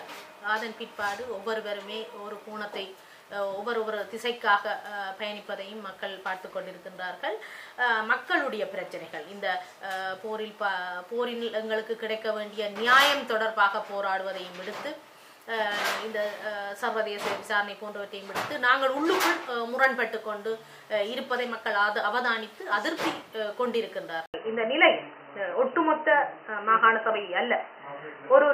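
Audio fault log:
24.26–28.54 s, likely input switched to a poorer device: an 80 ms gap, then dull sound with nothing above 3 kHz. A faint new noise floor and a level shift of about 5 dB set it apart from simple filtering.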